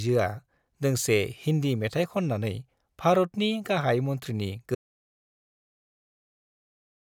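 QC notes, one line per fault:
4.75 s to end: audio dropout to silence. The speech cuts off mid-flow and the last 2.3 s are silence, with no room tone underneath. The input was likely lost, a disconnected device or failed link, while recording continued writing silence.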